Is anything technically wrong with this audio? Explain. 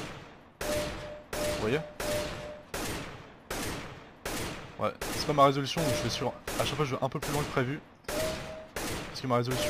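Yes. There are two drift correction steps, at 2.84 to 4.04 s and at 8.18 to 8.83 s. These most likely come from clock-matching software abruptly changing the playback rate to rebalance its buffer. In the first, the sound slows by 5.55% and drops about 99 cents, roughly a semitone flat. In the second, it speeds up by 5.55% and rises about 94 cents. Each time the pitch and tempo shift together, hold, then snap back to normal.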